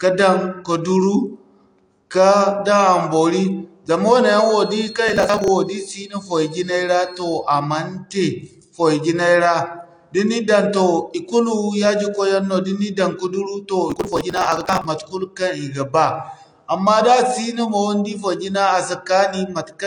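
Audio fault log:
throughout: AAC compression. The sound is dull, with nothing above 9.8 kHz. Sibilants have a smeared, fizzy texture. Sustained sounds warble. The likely cause is low-bitrate AAC-LC coding, which fits a rate around 32 kbps. At that rate the coder cannot afford the upper band, so it cuts it off. It also quantises the remaining frequency lines coarsely. That leaves holes that shift from frame to frame, and those shifts are heard as the warble.
4.17 to 7.49 s: feedback whistle. A thin tone at 4.3 kHz sits behind the sound, about 20 dB below it. Its level swells and fades slowly but never builds into a howl. This is likely a loudspeaker-to-microphone loop held just short of runaway feedback. The loop gain at that one frequency is close to one, so the tone keeps ringing without building. Because the gain stays just under that point, the whistle stays faint.
5.09 to 5.48 s and 13.90 to 14.85 s: processor overload crackle. 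Each run is a burst of gritty tearing over the sound, and it stops when the load passes. The second run ends just before "matekul kaŋ i ga". The processor missed many buffer deadlines in a row, dozens in the first run and more in the second. This fits buffers of around 10 ms. Each missed buffer was skipped outright. That leaves short gaps with hard edges, and the rapid string of edges is heard as crackle.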